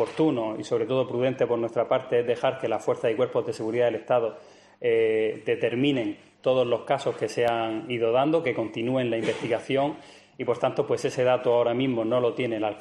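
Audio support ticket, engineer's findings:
Regular clicks every 1.35 s, 0.72 to 11.53 s, about ten. Likely clock drift buffer slips from a roughly 150 ppm clock mismatch, dropping or repeating a few samples each time.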